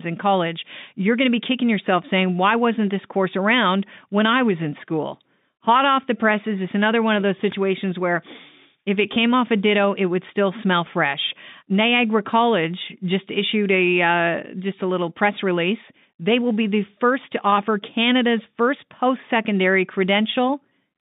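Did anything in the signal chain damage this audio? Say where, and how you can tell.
Yes, network packet loss with pitch repetition. Buzzy 20 ms holds occur at 9.14 s, after "if it", and at 17.50 s. The receiver repeated the last pitch period to fill each gap.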